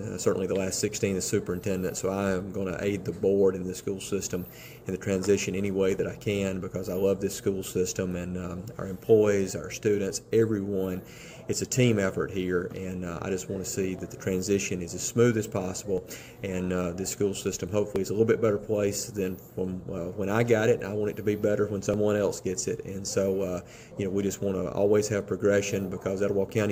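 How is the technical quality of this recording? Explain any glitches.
Five brief glitches interrupt the recording, all from overlap between stream segments. They occur at about 5.99, 13.99, 15.98, 17.96 and 21.94 s, each on a 2-second segment boundary. Where adjacent segments' timestamps overlapped, the player trimmed the overlap, though that audio wasn't actually duplicated, so roughly 5 to 16 ms of real sound is lost. The waveform jumps across the gap, heard as a short click or tiny skip at each point.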